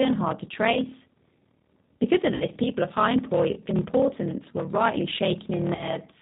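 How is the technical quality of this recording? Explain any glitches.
The quality is poor. Three faults are audible: a steady buzz with slowed pacing, plainly audible low-bitrate codec colouring, and three short dropouts.

Block size mismatch (padded) runs through the whole recording. One stage writes blocks of 1024 samples, but the next reads larger ones, about 1152, which fits a 44.1 kHz stream. The missing part of each block is filled with silence. That tiny gap repeats at 38.3 Hz, heard as a constant low buzz. The speech also runs at 0.889 times normal speed, yet keeps its timbre.

The G.729 codec damage is plainly audible throughout. The sound points to G.729 at 8 kbit/s. This codec models speech with a vocal tract filter, a pitch predictor and a few pulses per frame. Nothing above 4 kHz survives, so the voice is dull and band-limited. It also sounds rough and slightly synthetic, because the codec rebuilds the voice rather than keeping the waveform.

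VoIP packet loss concealed by the speech codec occurs three times. At 0.74 to 0.78 s, right after "hard to", about 20 ms was lost. At 2.34 to 2.44 s, just before "people of high", about 60 ms went missing. At 5.75 to 5.98 s, after "were rightly shaken in", about 40 ms was lost. In each case the decoder extends the last pitch and filter while lowering the gain. The result is a short buzzy tone or coloured noise that fades. The voice stays weak or distorted briefly after audio returns.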